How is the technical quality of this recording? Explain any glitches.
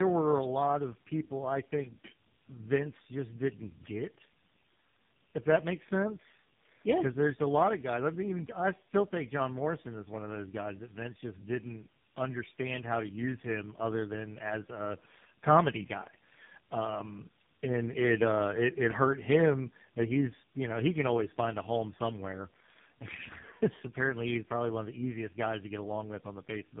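Quality is poor throughout because of tandem speech coding. The speech is rough, muffled and warbly, which fits three narrowband speech codecs in a row, each re-encoding the previous coder's errors. A spectrogram shows a hard ceiling at 3.7 kHz with smeared, wavering harmonics.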